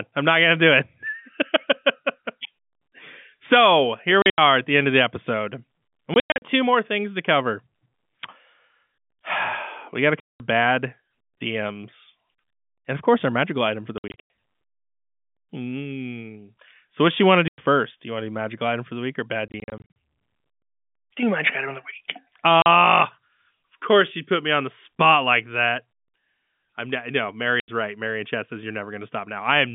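Packet loss filled with silence breaks the speech eight times: 4.22 s (after "so here", before "at the end of"), 6.14, 10.2 (after "got to"), 13.98, 17.48 (after "do you want to"), 19.48, 22.62 and 27.6 s. The receiver inserted silence where audio never arrived, and the holes have hard edges. The gaps run from 40 to 240 ms, all multiples of 20 ms, which fits 20 ms packets, over the narrow G.711 telephone band.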